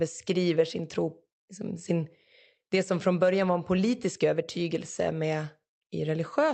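There are no technical faults to describe in time order here.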